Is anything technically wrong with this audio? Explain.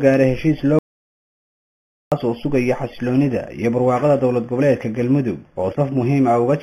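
Yes. There is an audio dropout to silence from 0.79 s to 2.12 s. The sound cuts off abruptly and stays dead for about 1.33 s. Then it returns mid-flow. The gap holds silence, with no room tone or noise floor underneath. The likely cause is a lost input, such as a dropped connection or a brief mute, while recording carried on writing silence. Whatever sounded during that stretch is missing.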